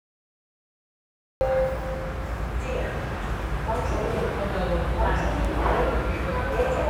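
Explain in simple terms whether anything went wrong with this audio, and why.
Cut-off start, from 0 to 1.41 s: the clip opens on dead digital silence, and at 1.41 s the sound suddenly appears already in progress. The recording began late, after the sound had started, so the first part was never captured. Real sounds build up or fade in, but here the sound jumps straight in at full strength with no natural beginning. It's like walking into a room partway through something and missing its start.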